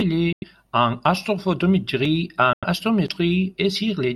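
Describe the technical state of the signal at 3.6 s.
At 3.6 s the speech signal is intact, with no technical fault to be heard at that moment.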